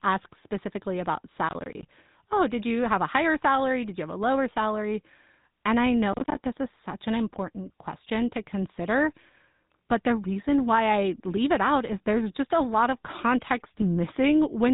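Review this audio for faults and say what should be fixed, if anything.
Throughout the speech there is the buzzy, gravelly roughness of the GSM full-rate codec, with nothing above 3.8 kHz. The coarse pulse excitation causes the grit, which fits the 13 kbps GSM full-rate codec. Unlike simple band-limiting, the texture itself is damaged. Use a wideband codec or the original recording.

From 1.49 to 1.87 s, after "asks specifically about", and from 6.13 to 6.39 s, before "this is such an", there are bursts of processor overload crackle. Missed deadlines leave runs of tiny silent gaps, fitting buffers of around 10 ms. Unlike a single dropout, the tearing is rapid and repeated. Reduce processing load or enlarge the audio buffer.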